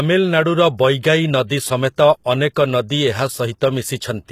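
Throughout, the speech has plainly audible codec damage, likely HE-AAC compression at a low rate, around 20 kbps: treble rebuilt from lower bands sounds gritty and lispy, with nothing above 14.9 kHz.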